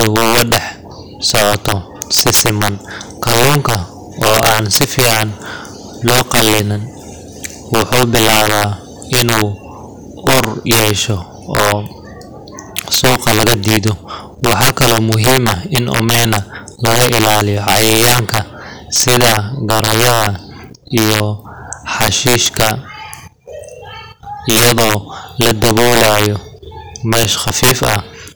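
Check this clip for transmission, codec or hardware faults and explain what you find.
There is one fault, present throughout the speech: integer overflow. The level is driven roughly 13 dB too hot, and instead of being limited, the small share of peaks that exceed full scale (about 2 percent of samples) wrap to the opposite sign. Those peaks then crack violently, far harsher than clipping. On the waveform, peaks jump abruptly from one rail to the other; the spectrogram shows sharp full-band vertical streaks.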